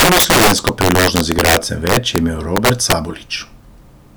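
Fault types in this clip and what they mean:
Integer overflow: Violent, sharp cracks burst out on the loudest moments of the speech throughout, far harsher than clipping. The signal is driven about 13 dB too hot, so a small fraction of samples, around 4 percent, exceed the integer limit and wrap to the opposite extreme.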